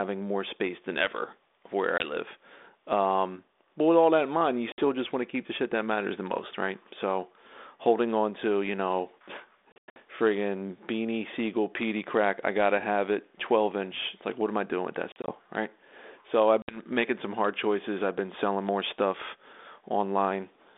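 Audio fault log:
1.98–2.08 s (after "than ever of where"), 4.72–4.81 s, 9.72–9.97 s, 15.12–15.33 s (after "I doing with that") and 16.62–16.80 s (before "making some hard choices"): packet loss on an ADPCM call. Gaps total 20 ms, 60 ms, 200 ms scattered over 240 ms (longest run 100 ms), 80 ms scattered over 160 ms (longest run 40 ms), and 60 ms. The lost packets become hard-edged silence, and the sizes point to 20 ms packets. What sets this apart from a plain dropout is the return: the 32 kbit/s G.726 decoder's predictor and step size are out of step with the sender's, so the speech comes back distorted until they catch up.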